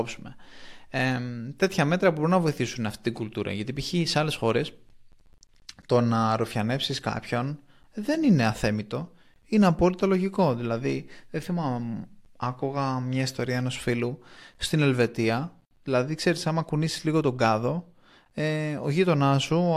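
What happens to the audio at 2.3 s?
Nothing goes wrong at 2.3 s; the audio is intact there and carries straight through that moment without any dropout, glitch or distortion.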